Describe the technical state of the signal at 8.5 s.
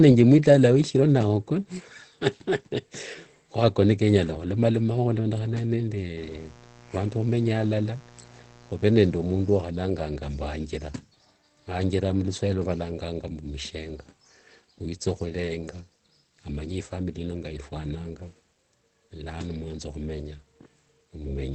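At 8.5 s the speech sits inside a stretch of mains buzz that runs from 6.17 s to 9.56 s. Sharp switching spikes, of the kind a dimmer, rectifier or broken shield lets through, arrive twice per cycle of 60 Hz mains, and their harmonics stack up from 60 Hz into the kilohertz range. The result is a steady, raspy buzz lying around 25 dB below the speech throughout that span.

The same moment also carries the band-limiting heard across the whole clip. Nothing reaches above 8.4 kHz, and the speech sounds plainly muffled and hoarse. That character is likely Opus compression running in its SILK speech mode at wideband, where a low bitrate in the region of 16 kbps forces the encoder to model the voice sparsely and drop the top octave.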